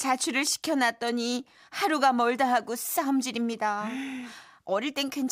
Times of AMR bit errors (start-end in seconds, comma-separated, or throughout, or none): none